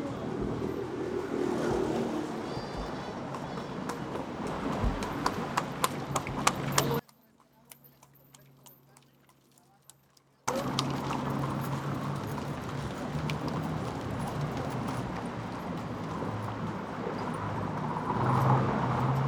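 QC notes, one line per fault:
6.99–10.48 s, one channel inverted: sound drops about 31 dB, likely one side flipped polarity so the shared centre cancels in mono.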